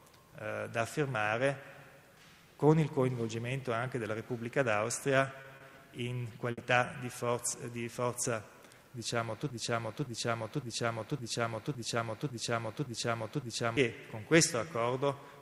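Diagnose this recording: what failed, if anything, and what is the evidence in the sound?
Network stage, jitter buffer: two short stalls from late packets, at 5.41 to 5.47 s and 5.56 to 5.63 s. In each, the sound is held slightly too long, with a faint buzz or sag, and then resumes exactly where it left off, with nothing skipped. A packet arrived late, the buffer ran dry, and the receiver stretched the last audio for about 30 ms and then 40 ms. Playback delay grew by the same amounts.

Network stage: a burst of packet loss at 6.52 to 6.61 s. The audio briefly turns into a held, fading continuation of the preceding sound and then jumps ahead. Consecutive packets never arrived in time to play. The receiver concealed the gap by extending and attenuating the last sound for about 60 ms, and when real audio returned, about 60 ms of material had been lost.

Playback or stream stage: a broken-record loop from 9.50 to 13.77 s. 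A fragment of about 561 ms repeats identically, back to back, eight times, and the audio due in that span never plays. The likely cause is that the player, encoder or stream stalled and kept re-sending the last fragment held in its buffer until data started flowing again.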